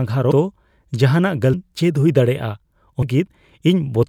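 At 0.30, 1.53 and 3.01 s the speech jumps forward. These are compressed frames skipped. Runs of 24 ms frames never play, so roughly 150 ms, 0.7 s and 0.3 s of audio vanish.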